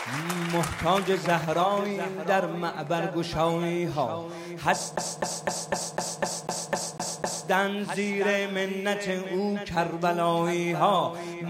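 A CD stuck on one turn runs from 4.96 to 7.48 s: the laser jumps back each rotation, repeating a 0.25 s loop ten times with brief mutes.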